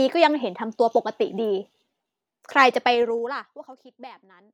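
In this speech clip, a rapid ticking zipper noise rides on the level as it falls by around 25 dB from 2.83 to 3.76 s, because the gain drops in unsmoothed 2 dB steps about fifteen times a second.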